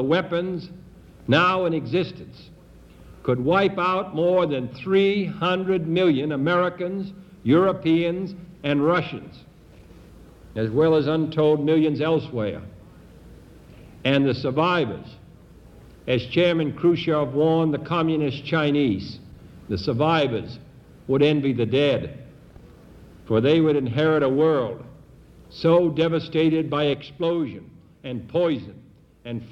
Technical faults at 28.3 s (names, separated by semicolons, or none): sudden gain jump